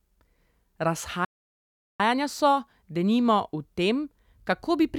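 It's a short speech clip with one playback stall in it. At 1.25 s the audio just cuts out mid-flow and stays silent until about 2.00 s, so you get roughly three quarters of a second of dead air before it picks up again. That gap is the player going quiet, most likely because it ran dry of buffered data or its playback thread got held up for a moment.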